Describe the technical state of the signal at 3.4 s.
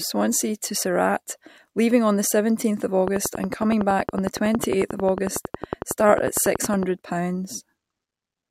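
At 3.4 s a train of clicks is ticking over the speech, a steady run of near-identical pops about 11 times a second from 3.08 s to 6.84 s, peaking roughly 15 dB above the voice. Likely cause is interference from nearby equipment or a faulty connection or power supply.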